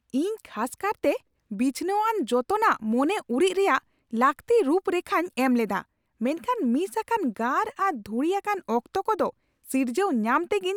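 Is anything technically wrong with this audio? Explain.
No, nothing technically wrong stood out on listening to this speech recording.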